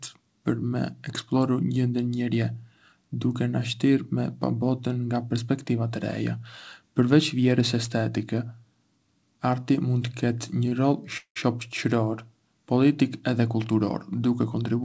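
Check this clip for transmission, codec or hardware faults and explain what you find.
Two stalls in the speech interrupt an audio path that is limited to about 8 kHz, as a wideband call codec such as G.722 would be.

At 10.69 to 10.73 s, just before "rol shoçëror politik edhe", a sound is held a little too long, with a faint buzzy smear. This is a short stall from a late packet. The jitter buffer ran dry, so the receiver extended the last sound for about 24 ms until the packet came in. Playback then picked up exactly where it had stopped, so nothing is lost, but everything after it now runs about 24 ms later.

At 11.17 to 11.38 s, just before "shoçëror politik edhe", the sound turns into a fading buzz and then drops to silence for roughly the last 100 ms before speech returns. This is a call audio freeze, likely caused by packets held up in transit, which emptied the jitter buffer. The receiver filled the 184 ms wait by stretching and fading the last sound. 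It resumed without losing any audio, so the gap adds another 184 ms of delay.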